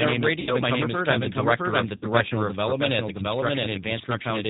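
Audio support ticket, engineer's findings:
Doubled audio track: whole clip echoed by a full-band copy roughly as loud as the original, trailing by around 0.7 s. Clean, no decay or room colour. Likely a second capture path or an edit holding two copies out of step.

G.729 codec: band stops at 4 kHz for the whole clip, with plainly audible rough, slightly synthetic texture. Fits G.729A at 8 kbit/s, with speech rebuilt from a vocal tract filter, pitch predictor and sparse pulses per frame.

VoIP packet loss concealed by the speech codec: 0.41–0.51 s, right after "name is", and again 1.96–2.07 s. Each is 60 ms of lost audio, consistent with about three packets. The decoder stretched its last pitch and filter into a fading buzzy tone or coloured noise, and the voice stays weak briefly after recovery.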